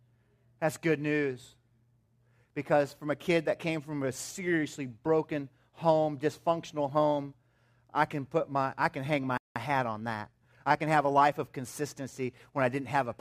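At 9.38 s the speech cuts out in mid-flow. Silence holds until 9.56 s, a gap of about 180 ms. This is a playback stall. The likely cause is the player running short of data, or its output thread being held up, so nothing reached the output for that span. When sound returns, it is a beat behind where it would have been.

From 9.56 s to 11.38 s the player works off that delay with time-compressed catch-up. It removes small slices of audio and cross-fades across each join. The speech runs at 1.1 times normal speed for nearly two seconds. Pitch stays where it was. The delivery sounds slightly hurried.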